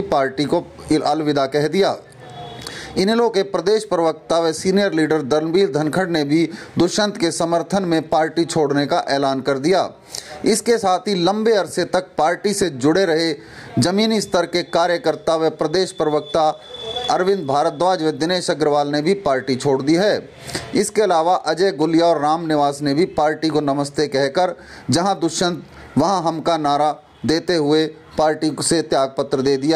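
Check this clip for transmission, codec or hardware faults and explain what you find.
Gain pumping runs through the whole clip, with a gain swing of around 15 dB. The likely cause is input gain set far too high for the microphone, forcing a fast compressor or limiter to clamp down on each peak and release between them. Loud and quiet passages sit unnaturally close in level, giving a squashed character.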